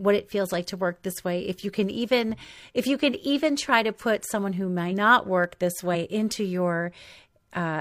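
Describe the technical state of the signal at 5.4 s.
A block of digital silence occurs at 5.44 s, lasting about 1.5 ms, which fits a 64-sample buffer going unfilled in time. The speech drops abruptly to silence and returns with no fade, and at this tiny length the two hard edges come across as a single tick or dip.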